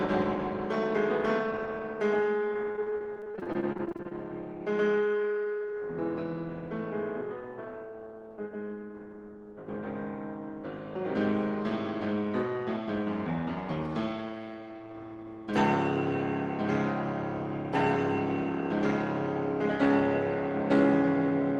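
Repeated packet loss (robotic sound) runs from 2.71 to 4.13 s. Around two dozen short dropouts, none longer than 29 ms, are each patched by stretching the preceding sound. Roughly a third of the stretch is filled this way, so it sounds choppy and robotic.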